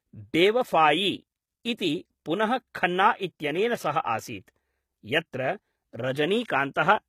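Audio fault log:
Throughout: HE-AAC compression, likely. The treble is rebuilt from lower bands and sounds gritty and metallic, with nothing above 14.9 kHz, which fits a bitrate around 20 kbps.
6.74 s: pre-echo. Quantisation noise spread across the transform block leaves a brief hiss about 17 ms ahead of a sharp attack, softening its onset.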